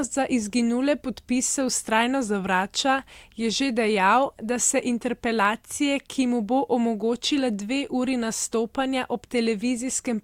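No technical faults can be heard anywhere in the speech. Nothing in it calls for a timestamp or a fix.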